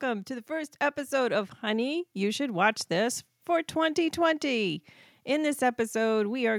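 From 0.05 s to 3.27 s the speech shows automatic gain rising: the level control judged the incoming signal too quiet and pushed its gain up steadily, by about 6 dB over those three-odd seconds. Because the gain sits ahead of everything, the voice and the room noise beneath it swell together, so the background grows as audibly as the speech. The result is a slow, even climb in loudness rather than a step.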